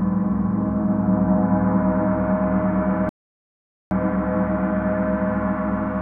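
The audio has one clear fault, a playback stall. At 3.09 s the sound stops abruptly in mid-flow. Silence follows for about 0.82 s, until 3.91 s. Then the sound carries on again. The gap is too long to be a single lost block, and nothing in the audio fills it. The likely cause is a player that ran short of data, or a playback thread that was blocked until it could resume feeding the output.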